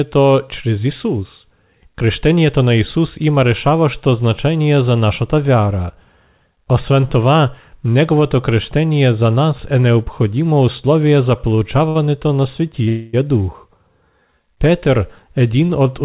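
Right after "е необходимо условие за", from 11.38 to 11.97 s, there's repeated stalls, a stutter: five short hitches, the longest 64 ms, adding up to about 110 ms of patched-in sound. Packets kept showing up late, the jitter buffer kept running dry, and the receiver stretched the last bit of speech each time, so it drags rather than losing anything. Then at 12.88 to 13.28 s comes a call audio freeze. The speech hangs on a smeared continuation of the last sound for about a quarter of a second, with no drop to silence, before carrying on from where it stopped. That's likely packets held up in transit emptying the buffer, and everything after it ends up roughly 250 ms later. All of this sits on top of the narrowband call sound, with nothing above 4 kHz, which fits a G.711-style phone codec.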